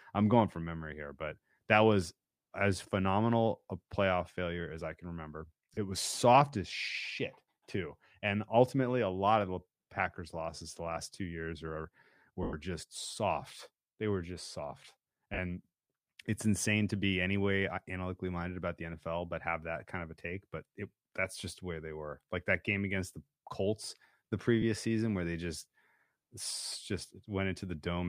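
Lost LE Audio frames occur at 5.74 s (30 ms), 12.43 s (100 ms), 15.34 s (40 ms), 24.62 s and 26.68 s (40 ms). Each time, the LC3 decoder refills the gap with the last received spectrum and randomised signs, so the speech briefly turns into a noisy smear. The 100 ms gap lasts long enough to fade as the concealment decays.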